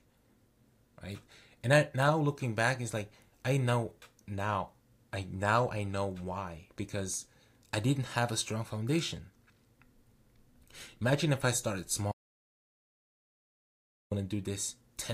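At 12.12 s the speech just stops dead and stays gone until 14.11 s, so you lose about two seconds outright. That's an audio dropout to silence: the gap is silent, with no room tone or hiss underneath, which tells you the input signal vanished while the recording kept running. Most likely the source dropped out, whether from a loose connection, a link hiccup or a mute, and whatever was said in that stretch is unrecoverable.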